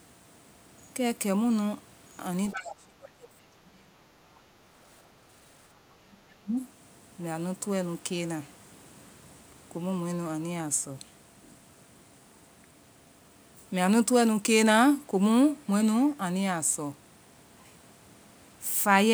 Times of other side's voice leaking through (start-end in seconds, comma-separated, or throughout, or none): 2.50-2.75